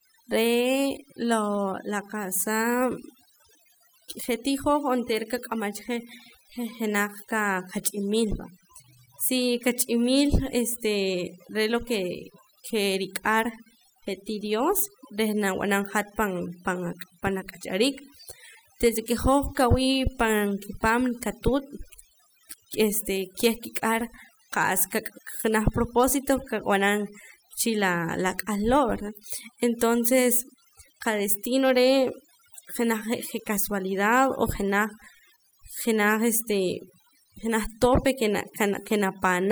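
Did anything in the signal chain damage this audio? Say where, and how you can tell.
Yes, overdone noise removal at the processing stage damages the whole clip. The noise reducer is set so aggressively that frequency bands near its noise estimate are pulled down or gated off. The background becomes near silence sprinkled with twinkling specks, and quieter parts of the speech are removed too. On a spectrogram, the background shows as isolated flickering dots in empty space, and the speech harmonics look ragged and patchy.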